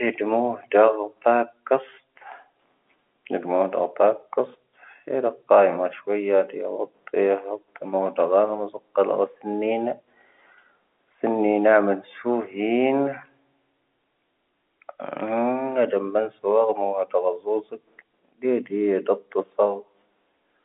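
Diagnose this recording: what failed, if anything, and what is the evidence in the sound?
Nothing failed in this recording.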